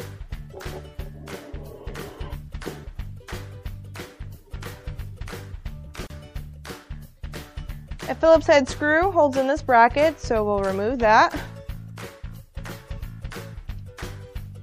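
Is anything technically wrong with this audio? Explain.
Yes, there are two faults. MP3 compression runs through the whole clip: the sound is watery and swirly, with plainly audible damage. This is likely an encoder short of bits, dropping high frequencies and weak components that flicker between frames, which fits a bitrate of about 64 kbps.

A gap at a join of encoded pieces opens from 6.07 to 6.10 s, a 34 ms gap with smeared edges before the sound resumes where it stopped. Separately encoded segments were spliced untrimmed, so encoder start-up delay and end padding remain as dead air.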